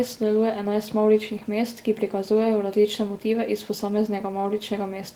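There are no technical faults to describe in time order in this speech clip.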